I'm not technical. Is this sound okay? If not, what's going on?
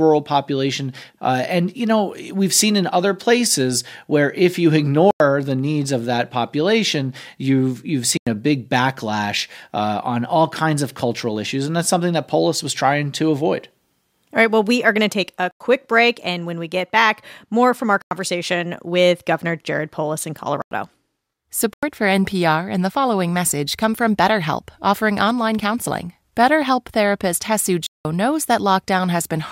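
No. The speech drops into a block of digital silence seven times: 5.11, 8.17, 15.51, 18.02, 20.62, 21.73 and 27.86 s. Each hole lasts 93 ms, the last 186 ms. That fits software missing a 4096-sample buffer.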